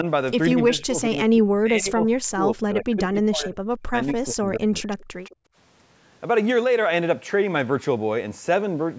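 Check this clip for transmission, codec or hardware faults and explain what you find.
There are three echo-canceller problems packed into the first two thirds of this speech clip.

Speech suppressed in double talk: from 0.53 to 3.57 s, 3.82 to 3.95 s and 4.12 to 4.91 s the voice sinks by roughly 25 to 35 dB. That's likely the canceller ducking everything while both ends talked.

Echo leak: from 4.9 to 5.05 s and 5.23 to 5.36 s, a faint copy trails about 157 ms behind, about 25 dB down. It's likely loudspeaker pickup that slipped past cancellation.

Background gated by the echo canceller: from 5.36 to 5.55 s the room sound drops out by about 27 dB while the far-end loudspeaker plays, then snaps back when the canceller releases.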